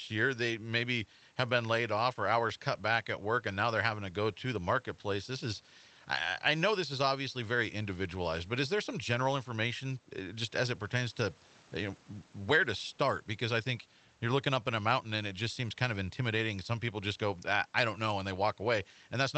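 No faults in this speech; it has come through a WebRTC call path, with the audio band ending around 8 kHz and the coding texture of an Opus link at roughly 24 kbps.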